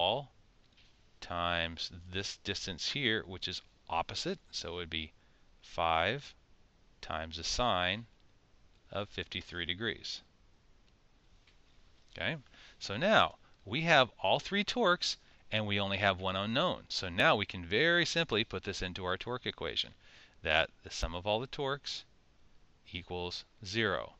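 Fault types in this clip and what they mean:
Dropped buffer (overrun): two small forward jumps in the sound, near 17.2 s and 21.03 s. The first skips only a few milliseconds and the second roughly 20 ms. The likely cause is hardware overwriting samples before the program collected them, which joins the remaining audio directly.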